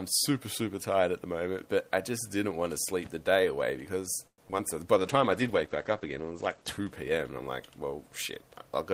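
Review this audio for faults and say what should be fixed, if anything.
From 4.27 to 4.61 s there's repeated packet loss, which gives a robotic sound. Four short gaps land close together, each patched by stretching the last bit of audio. About 40% of that span is concealment, and the longest hole is 106 ms, so it sounds choppy with pieces missing.

Right after that, from 4.99 to 5.70 s, a jitter buffer slow-down kicks in. The receiver repeats tiny chunks of audio to rebuild its reserve, adding 51 ms. Playback runs at 94% speed while the pitch stays the same, so that stretch sounds slightly drawn out.

Overlapping that, from 5.00 to 7.70 s, there's a call bitrate drop. The encoder gets squeezed, which fits a fall from around 32 kbps to 12 kbps, and the top end collapses from 20 kHz to 8 kHz. It sits at the lowest rate for 1.59 s, and the audio turns muffled and a bit watery until it recovers.

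To prevent this, give the link more stable bandwidth and headroom, for example a wired connection or less competing traffic, so packets arrive on time and the bandwidth estimate doesn't crash.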